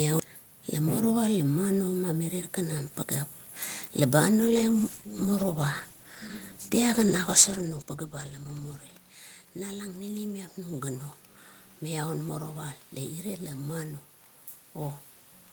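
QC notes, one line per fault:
4.41–8.91 s, call bitrate drop: the sound turns coarse and muffled for about 4.4 s, consistent with the encoder falling from 32 to 14 kbps and cutting the highs.
9.69–11.10 s, automatic gain rising: after the input fell about 13 dB, gain climbs about 4 dB over 1.4 s, so voice and room noise swell together.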